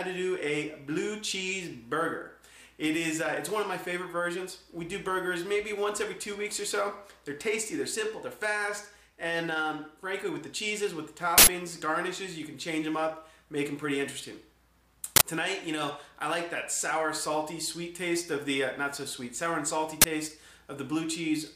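Loud digital-noise bursts at 11.38–11.47 s, 15.16–15.21 s and 20.02–20.04 s are uninitialised buffers, stale memory played as audio; their 93, 46 and 23 ms lengths fit 4096-, 2048- and 1024-sample buffers.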